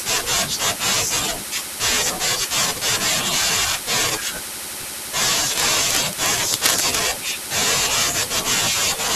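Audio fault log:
5.46–6.96 s, cable scratch noise: for about one and a half seconds a harsh, crackling rasp sits over the speech, sitting only a little below it in level, with dense, irregular bursts rather than a steady hiss. The likely cause is a worn cable, plug or control being moved while recording, so its contact resistance jumps about rapidly and injects those ragged noise bursts straight into the signal until the movement stops.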